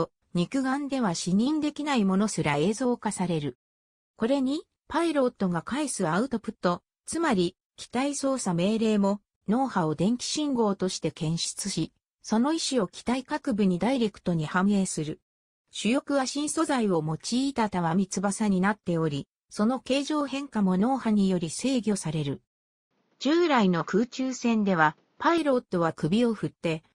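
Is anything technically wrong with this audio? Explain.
Yes. From 22.91 to 25.38 s, the input likely switched to a poorer device. That device passes a narrower band. Nothing above 7.2 kHz gets through. The sound turns dull and boxy, with a faint new noise. There is no gap at the switch.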